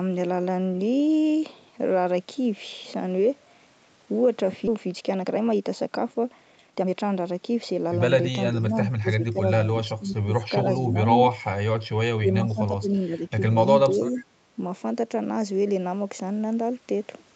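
At 4.67 to 4.69 s the speech makes a skip ahead. Roughly a second of audio never plays, and the material on either side is butted together with no fill. On a waveform the envelope changes abruptly at the splice. A spectrogram shows the harmonic pattern breaking off and resuming at an unrelated point, with no silent column between. The jump happens because the receiver discards a backlog of audio that was already queued.

From 4.77 to 7.91 s a jitter buffer speed-up follows. The receiver trims short pitch-period-sized pieces over and over to drain the extra delay, removing about half a second in total. Speech runs at roughly 117% speed with its pitch unchanged, so it sounds hurried. On a spectrogram the harmonic spacing stays constant while syllables and pauses are compressed in time. The waveform shows whole periods dropped and the remaining ones stitched together, with no gaps.

Four stretches of speech suppressed in double talk come next: 8.51 to 9.42 s, 9.84 to 11.05 s, 12.17 to 13.32 s and 13.85 to 14.25 s. 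In each, the level dips and parts of the speech duck or cut out. The dips add up to between a few hundred milliseconds and about a second per stretch and reach about 10 to 20 dB at their deepest. The likely cause is an echo canceller turning down a talker it could not separate from loudspeaker echo while both sides spoke. The waveform shows a notched, pumping envelope. A spectrogram shows the harmonics fading, with the upper band thinning.

At 14.16 to 14.21 s there is a brief echo leak, a faint copy of the speech about 448 ms late and about 25 dB below it. Residual loudspeaker pickup that was not cancelled is the likely source. On a spectrogram it appears as a weak, smeared repeat of earlier harmonic structure. In the waveform it is a low ripple riding under the main signal. All of this sits within a band that stops at 8 kHz.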